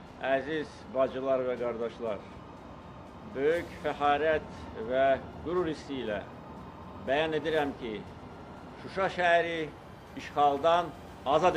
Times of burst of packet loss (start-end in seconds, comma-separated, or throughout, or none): none